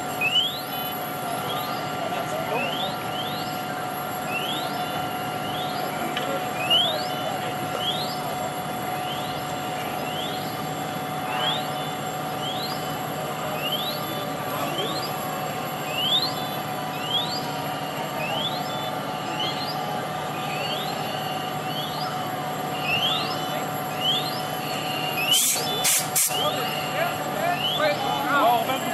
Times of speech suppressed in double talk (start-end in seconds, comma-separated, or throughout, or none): none